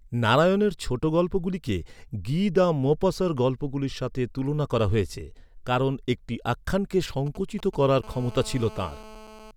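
A galloping dit-dit-dit of short raspy buzzes breaks into this speech recording from 7.26 to 7.84 s, right after "হয়েছে কারণ একটি আখ্যানকে", sitting well below the level of the speech. These are GSM signalling bursts. A nearby 2G phone is exchanging brief control transmissions with the network, and the audio circuitry rectifies those radio pulses into sound. Each group carries the 217 Hz framing rate, which is why the bursts buzz. From 8.04 to 9.51 s the sound changes to a continuous hard, raspy buzz at 217 Hz, rich in harmonics and about 20 dB below the speech. This is GSM phone buzz: a nearby phone is in an active call and now transmits steadily 217 times a second. The circuit demodulates that pulse train into a constant drone that has nothing to do with the speech.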